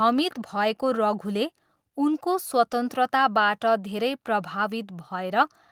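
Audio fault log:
No faults are heard in this speech recording. Nothing in the audio calls for an entry in the log.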